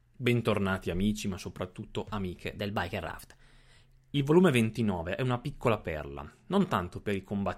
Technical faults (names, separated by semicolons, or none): wrong sample rate